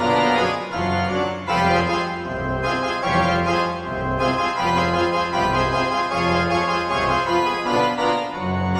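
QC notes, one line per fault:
4.78 s and 7.76 s, audio missing between chunks: two abrupt skips where a sliver of roughly 20 ms vanishes and the sound on either side is butted together with no gap, so the material jumps forward rather than falling silent. The two skips are 3 s apart, which points to a recorder or processor working in 3-second blocks that likely lost a little audio at each block handover. Unlike a dropout, nothing goes quiet.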